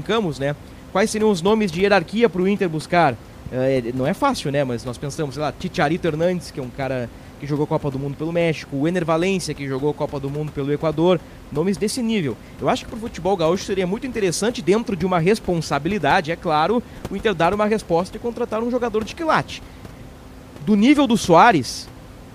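No technical faults can be heard anywhere in the recording. A steady background of room noise from the microphone's surroundings sits about 19 dB below the speech.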